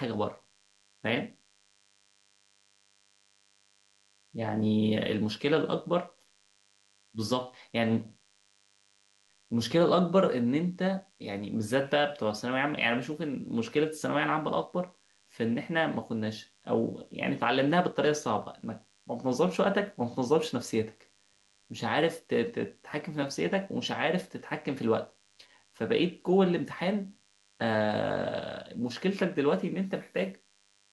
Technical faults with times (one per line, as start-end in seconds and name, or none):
0.00-30.93 DECT cordless phone buzz